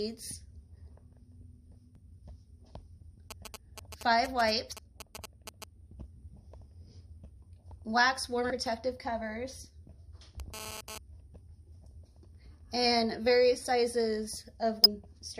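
Damaged data in a compressed stream at 1.95 s: corrupted bytes throw the decoder off its frame sync, producing a brief glitch while it hunts for the next header.

GSM signalling bursts from 3.31 to 5.64 s: a nearby 2G phone's short radio bursts are rectified by the audio circuitry, giving a galloping dit-dit-dit of brief 217 Hz buzzes, roughly 10 dB below the sound.

Damaged data in a compressed stream again from 4.72 to 4.74 s and at 8.50 s: each is another short glitch where the decoder loses frame sync.

GSM phone buzz from 10.40 to 10.98 s: a 2G phone transferring data pulses at 217 times a second, and the rectified pulses make a hard, raspy, harmonic-rich buzz at about 10 dB below the sound.

Damaged data in a compressed stream from 14.84 to 14.86 s: a final glitch where the decoder loses sync.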